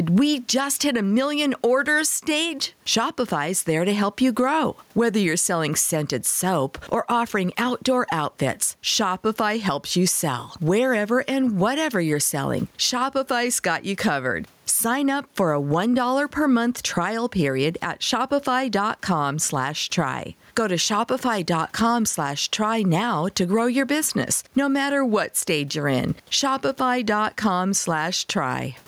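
Throughout the speech, the gain swings by around 10 dB, squashing loud and soft parts together. This is gain pumping, likely from input gain set far too high, with a fast limiter clamping each peak.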